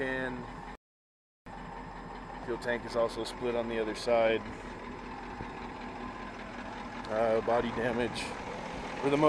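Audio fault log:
0.75–1.46 s, rebuffering stall: the audio drops to silence for about 0.71 s, then resumes exactly where it left off. Playback ran out of downloaded data and paused until more arrived, so no material is lost, but the gap adds time to the clip.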